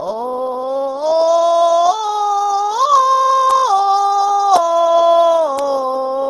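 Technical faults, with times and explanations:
Throughout, likely Opus compression: the music sounds grainy and rough, with nothing above 12.1 kHz. Band energy survives, but detail gets noise-filled, which fits a low rate of around 12 kbps.
3.51 s, 4.56 s and 5.59 s, bit error spikes: each is a lone sharp, broadband tick where a flipped bit jolts one to three samples by a power of two before they snap back.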